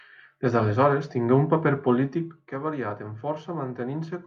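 Listening through the speech, nothing stood out as a technical problem at any point.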